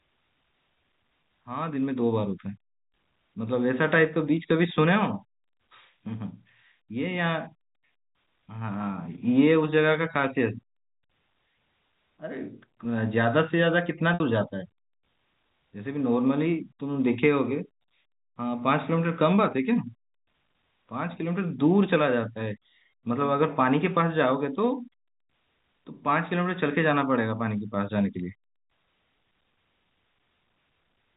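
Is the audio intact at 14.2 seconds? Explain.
No. From 14.14 to 14.20 s the sound briefly sticks on a held, slightly buzzy tone that thins out before normal audio picks up again through a quick cross-fade. This is packet loss with pitch repetition: about 60 ms of signal went missing, which fits three 20 ms packets, and the receiver filled the gap by repeating the last pitch period and fading it down rather than leaving a hard dropout.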